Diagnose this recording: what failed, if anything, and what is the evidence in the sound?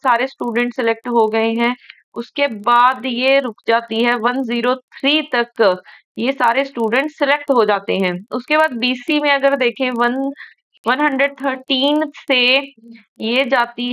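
The failure is in the sample-rate conversion stage, where the resampler restarted on every block. A steady 25 Hz tick-buzz runs throughout, only where signal is present, fitting 40 ms blocks converted separately, likely a 48 kHz to 24 kHz step. A spectrogram shows faint vertical lines every 40 ms, and the waveform shows small discontinuities at each block edge.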